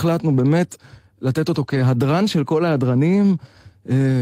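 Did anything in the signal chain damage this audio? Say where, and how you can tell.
Yes. The damage is in the network stage, patched up by the codec. From 1.63 to 1.81 s the speech turns rougher and noisier, but there is no gap or dropout. That pattern points to lost packet rebuilt from error correction. Several packets went missing across that stretch, which fits roughly 100 ms of rebuilt audio. The packet after each loss held a low-bitrate copy of it, and the decoder played those coarser copies instead of silence.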